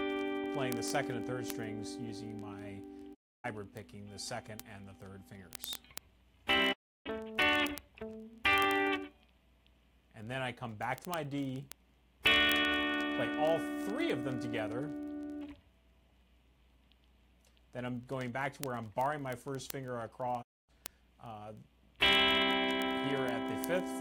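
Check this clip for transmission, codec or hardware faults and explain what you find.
Two faults are audible: a continuous train of clicks running the whole length of the audio, and three brief silences where the signal cuts out and comes back.

Word clock ticks run from 0.10 s to the end at 24.00 s. They are sharp ticks of uneven strength repeating about every 20 ms, roughly a thousand in all, giving the audio a constant buzzing grit. A device reading a digital link on its own, unlocked clock drifts against the sender by something near a thousand parts per million. Each time the two clocks slip past each other, a single sample is dropped or doubled, and that discontinuity produces a tick.

A digital broadcast dropout occurs three times: 3.13 to 3.46 s, 6.72 to 7.08 s, and 20.41 to 20.71 s. Each time, the sound fades out over about 20 ms and then falls silent for roughly a third of a second (0.29, 0.32 and 0.26 s). 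The receiver stopped getting frames it could decode, so it muted until valid data resumed. The gap lengths fit runs of about eight to ten lost frames of around 32 ms each. Whatever was transmitted during those gaps is gone.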